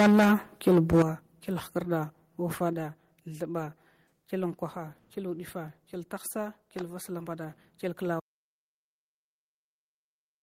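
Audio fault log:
0.00–0.34 s and 0.67–1.02 s, microphone overload: the loudest peaks are flattened, with about 40% of the samples clipped in the first burst and about a fifth in the second, driven about 12 dB and about 11 dB past the converter's limit. That harsh, crackling edge likely comes from input gain set too high for the converter.
1.02 s and 2.73 s, microphone volume stepped down: the whole signal, voice and background together, drops abruptly, by about 11 dB immediately after the second distorted passage and by about 4 dB later. Single-step falls like these are likely software cutting the device's input volume.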